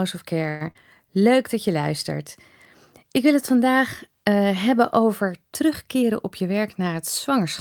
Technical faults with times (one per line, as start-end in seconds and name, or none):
0.49-0.63 call audio freeze
0.71-0.77 short concealed packet loss
5.95-7.46 jitter buffer speed-up